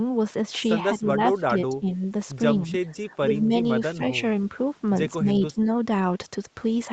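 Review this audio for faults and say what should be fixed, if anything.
The speech dips and thins out in short patches at 0.98 to 1.18, 1.41 to 2.02, 2.66 to 2.76, 2.98 to 3.53, 3.94 to 4.12, 5.21 to 5.31 and 5.47 to 5.67 s, falling by up to about 10 dB. This is likely speech suppressed in double talk. When both ends spoke at once, the echo canceller could not separate this talker from the loudspeaker echo and turned the talker down along with it. To prevent it, the echo canceller should converge better and apply gentler suppression during double talk.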